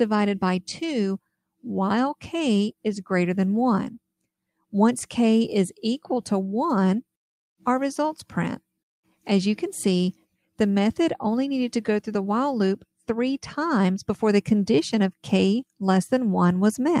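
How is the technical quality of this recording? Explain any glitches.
The technical quality of this recording is sound, with no glitches to explain.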